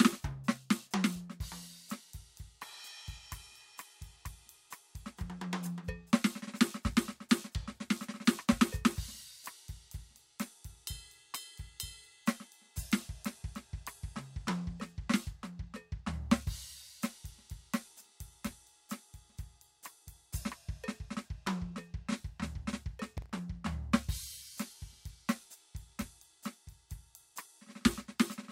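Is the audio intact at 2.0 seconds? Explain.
Yes, the music is intact at 2.0 seconds, with no audible fault at that moment.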